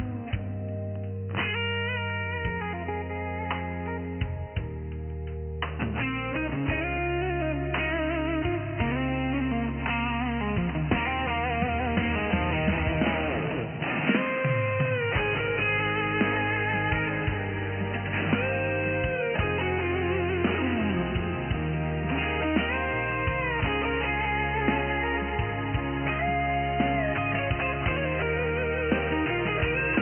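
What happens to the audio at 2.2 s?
Nothing goes wrong at 2.2 s: the audio plays through that moment intact, with no dropout, click, distortion or other fault to be heard.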